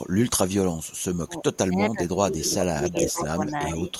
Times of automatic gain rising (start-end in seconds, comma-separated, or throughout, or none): none